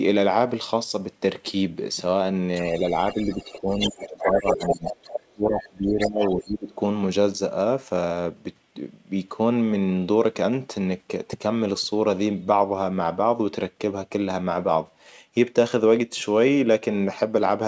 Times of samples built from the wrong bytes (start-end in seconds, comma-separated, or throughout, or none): none